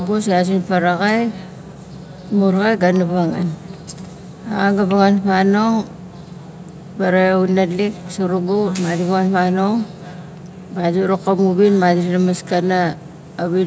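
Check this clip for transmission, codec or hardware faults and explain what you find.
Nothing stood out on listening to this speech recording.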